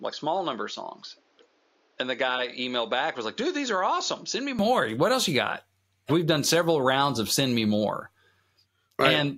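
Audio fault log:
0.00–4.59 s, input switched to a poorer device: the opening stretch of speech sounds dull and boxy, with nothing above about 7 kHz, a level roughly 5 dB lower, and a faint added background noise well beneath the voice. At 4.59 s, just before "what else you got", the sound opens up and brightens with no gap. The likely cause is recording starting on a narrower-band input before switching to the proper microphone.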